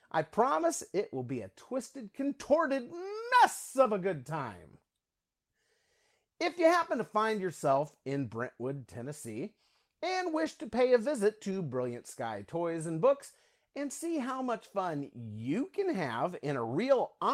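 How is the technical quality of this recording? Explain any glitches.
The speech is marred by a series of brief dropouts, each patched so that no silence is heard.

At 0.61, 2.41, 3.85, 6.83, 7.87, 10.45 and 11.51 s, a 20 ms stretch turns momentarily rougher and noisier. Each is a lost packet rebuilt from error correction: the following packet carried a low-bitrate backup copy, which the decoder played in place of the missing audio.

From 3.83 to 3.87 s the sound smears or wobbles briefly before settling. This is short concealed packet loss: about 20 ms arrived too late, and the receiver bridged roughly 15 ms by extending the preceding sound before blending back into the real signal, overlapping the rebuilt packet at 3.85 s.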